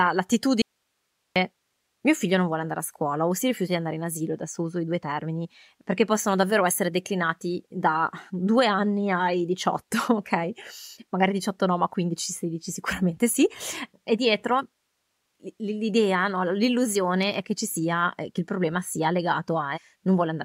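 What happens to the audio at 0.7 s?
An audio dropout to a faint residue runs from 0.62 to 1.36 s: the speech vanishes abruptly, leaving only hiss about 50 dB down, likely a signal-path interruption.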